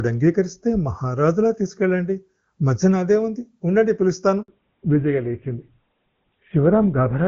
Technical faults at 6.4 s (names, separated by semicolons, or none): fallback to narrowband